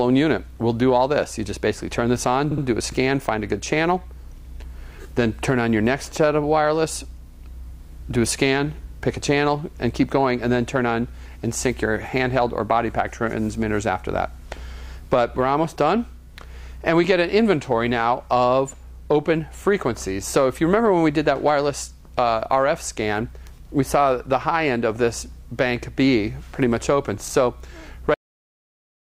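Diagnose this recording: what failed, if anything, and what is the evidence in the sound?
Repeated frames in the codec or storage stage: a 64 ms stretch of compressed data was written or delivered again, so the decoder replayed it. The sound stutters at 2.51 to 2.64 s, where the stretch plays twice more and adds 128 ms, and at 27.28 to 27.34 s, where it plays once more and adds 64 ms.

Cut-off end at the storage or playback stage: the final buffers were never written or played out. At 28.14 s the sound stops mid-event and drops straight to silence with no natural decay, which shows the tail was lost rather than ending on its own.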